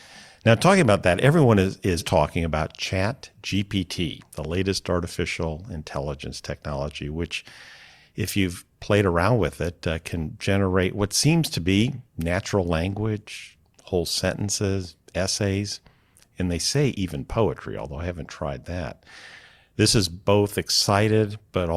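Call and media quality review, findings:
No faults found in the speech signal: nothing to attribute to any component in the capture, processing or delivery path.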